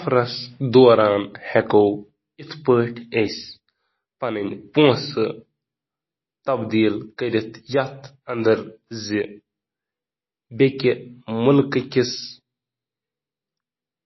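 Throughout the speech, likely MP3 compression at a starved bitrate, around 24 kbps, cuts everything above 5.8 kHz and drops weak frequency lines frame by frame, so the sound is dull, plainly watery and swirly, with chirpy sibilants and smeared consonant attacks.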